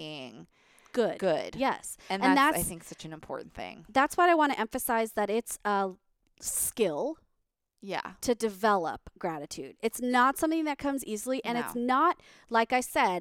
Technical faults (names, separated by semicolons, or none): none